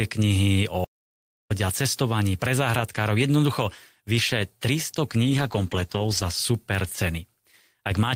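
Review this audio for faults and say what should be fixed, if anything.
From 0.84 to 1.51 s the speech breaks off and about 0.66 s of audio is lost to an audio dropout to silence. The gap holds silence with no room tone. On the waveform it shows as a flat line with abrupt edges, and on the spectrogram as a solid black vertical band across all frequencies. The likely cause is the input briefly disconnecting or muting while the recorder kept writing silence. Securing the connection and monitoring the input level so any loss is caught would prevent it.

Between 5.2 and 6.35 s a call bitrate drop makes the speech turn rough, watery or muffled for roughly 1.1 s at its worst before clearing. The sound points to the encoder being pushed from around 32 kbps down to about 13 kbps, coding more coarsely and discarding the upper band. On a spectrogram the high frequencies vanish above a sudden horizontal ceiling, with smeared, blocky texture below it, while the waveform envelope looks largely unchanged. 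Providing steadier network bandwidth, or a higher minimum bitrate for the encoder, would prevent it.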